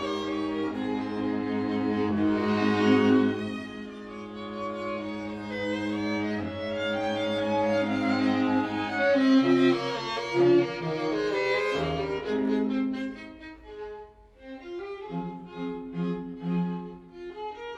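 Channel delay (comb filtering) runs through the whole clip. One channel arrives around 20 ms late, and the two are summed to mono. Shared content cancels at evenly spaced frequencies, starting near 20 Hz. The audio sounds rough or slightly doubled throughout.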